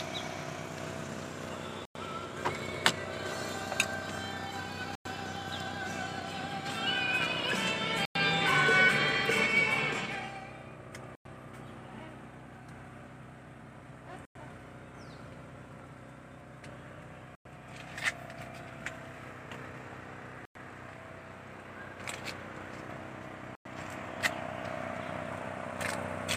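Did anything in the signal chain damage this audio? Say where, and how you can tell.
Yes: gap between chunks at the chunked storage or playback stage. Hard-edged 100 ms silences at 1.85, 4.95, 8.05, 11.15, 14.25, 17.35, 20.45 and 23.55 s interrupt each 3 s block, with no sound lost.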